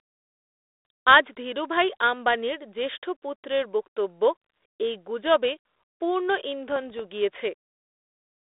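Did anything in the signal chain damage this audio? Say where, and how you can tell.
Yes. Right after "এই গুজবে পূর্ণ", from 6.70 to 7.00 s, pops and rough bursts with brief level jumps point to bit errors on an ADPCM link in the 32 kbit/s G.726 path. A flipped bit at a low rate knocks the decoder's step size and predictor off track, so each error rings on for milliseconds.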